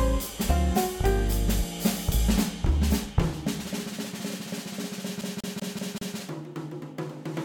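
At 5.21 s the music catches and begins to stutter. This is a CD stuck on one turn. A scratch sends the laser back one track each time the disc comes round. The same slice of about 0.19 s plays five times in a row, until 6.17 s. A tiny mute marks each jump. The result is a quick, perfectly even skip, mechanical rather than musical.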